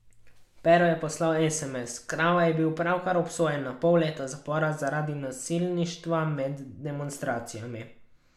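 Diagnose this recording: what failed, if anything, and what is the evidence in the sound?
Nothing failed: the speech shows no audible defect at any stage of the chain.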